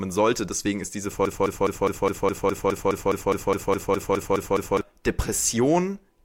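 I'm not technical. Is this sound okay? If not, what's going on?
No, it isn't. From about 1.25 s to 4.81 s, the speech gets stuck in a broken-record loop. A tiny piece, about 0.21 seconds long, plays over and over, 17 times in a row. It sounds like a stutter that won't stop. The most likely cause is a playback or streaming stall, where the system kept replaying the last bit it had. Whatever was said during those seconds is missing.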